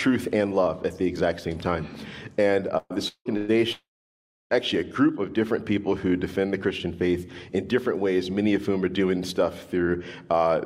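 At 2.77 to 2.93 s the sound stretches into a brief hold that fades over roughly 127 ms, then goes quiet for about 30 ms before resuming. About 120 ms of material has been skipped. This is a burst of packet loss: several consecutive packets never arrived in time, so the receiver extended the last audio and attenuated it across the gap. At 3.37 to 3.51 s the same thing happens, with about 111 ms of fading fill, no silence, and 120 ms lost.

From 3.08 to 3.28 s the sound is held and fades over about 171 ms, and roughly 90 ms of silence follows before playback picks up 180 ms further on. This is likely a long network dropout, where no packets reached the receiver for that stretch. A longer one runs from 3.72 to 4.53 s. A fading hold gives way to about 670 ms of silence, and roughly 780 ms of audio is lost, which again is likely a long network dropout.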